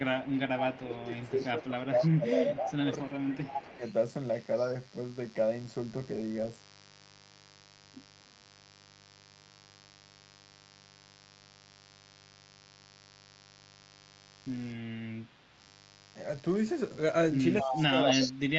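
A speech recording carries mains buzz throughout: a raspy, steady hum about 25 dB below the speech, likely from switching spikes entering the chain twice per 50 Hz cycle. On a spectrogram it shows as evenly spaced horizontal lines at multiples of 50 Hz, stacked into the kilohertz range. Echo leak, likely from a loudspeaker on one side whose echo canceller let some of its own pickup return, adds a delayed copy of the voice 267 ms behind the original at 0.21–0.81 s, 1.19–2.15 s, 2.56–3.93 s, 4.57–4.68 s and 17.6–18.32 s. It sits about 20 dB down in the first two stretches, about 15 dB in the third, about 25 dB in the fourth, and only about 5 dB down near the end, visible as a fainter, shifted repeat of the speech patterns. Speech suppressed in double talk, likely the canceller ducking the talker while both sides spoke, makes the voice dip and thin out in pieces from 0.26 to 3.83 s, roughly 3 s affected with drops of about 15 dB. 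From 17.63 s to the end it drops by about 30 dB, showing as gouged-out gaps in the waveform envelope and missing high-frequency energy on the spectrogram.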